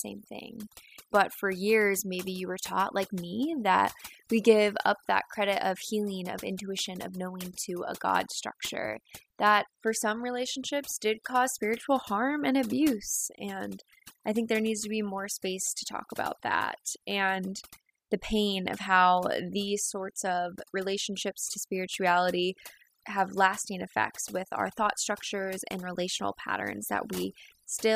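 From start to finish there's overdone noise removal on this speech. The reducer was pushed too hard, so bands near its noise estimate get pulled right down along with the quieter parts of the voice, leaving a lowered background that breaks up into twinkly specks.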